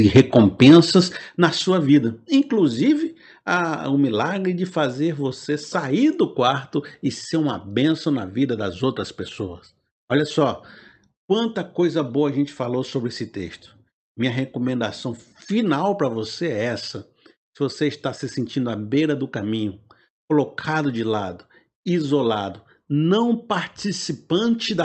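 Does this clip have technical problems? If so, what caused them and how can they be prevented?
Yes. From 0.15 to 0.8 s, the loudest syllables of the speech have a harsh, crackling edge, and the sound clears up just before "na sua vida inclusive". This is most likely microphone overload. The input level was set so high that peaks went about 6 dB past the converter's limit. Their tops were flattened, with roughly 4 percent of samples hitting the ceiling, and the flat-topped waveform produces that gritty distortion. Keeping the microphone input gain lower, so that the loudest peaks stay well below full scale, prevents it.

There are two sudden drops in level, affecting the voice and the background alike. The first comes at 0.17 s, early in the distorted stretch, and is about 3 dB. The second comes at 1.17 s, just before "na sua vida inclusive", and is about 8 dB. These point to the microphone volume being stepped down. 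The call software detected the overly hot signal and cut the device's input volume in discrete jumps, rather than easing it down. The call's codec path cuts off the highs at 8 kHz. Setting a sensible input level before the call starts, or turning off automatic adjustment of the microphone volume, prevents these abrupt steps.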